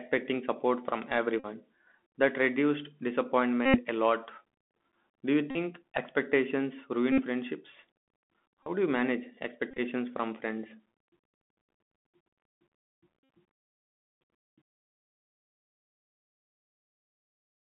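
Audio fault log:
Throughout: Bluetooth CVSD headset codec. The speech is held to roughly 200 Hz to 3.4 kHz. Each sample is coded as one up-or-down bit at 64 kHz with an adapting step, so loud, high sounds outrun the step and distort, s sounds turn scratchy, and a grainy hiss sits beneath.
1.40 to 13.28 s: Bluetooth headset packet repeated, at 1.40–1.46 s just after "support from", 3.66–3.80 s before "a lot", 5.51–5.56 s, 7.12–7.23 s, 8.63–8.69 s before "do you manage", 9.71–9.80 s, and 13.24–13.28 s. Each time, lost packets were filled by decoding the previous one again. The repeat every 3.75 ms gives a steady buzz near 267 Hz. At 9.7 s the gaps are scattered, so the buzz comes in short stretches of up to about 20 ms.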